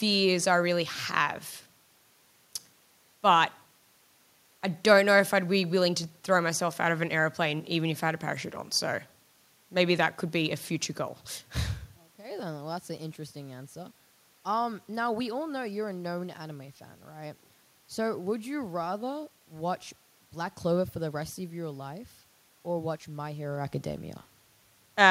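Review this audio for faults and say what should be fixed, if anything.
Nothing here needs fixing; the background noise of the room is simply part of the recording, and the level changes around 12 s and again near the end just come from the talker shifting relative to the microphone.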